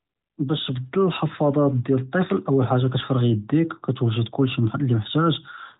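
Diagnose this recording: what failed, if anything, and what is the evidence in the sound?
Nothing failed in this recording, and the sound gives no evidence of a fault.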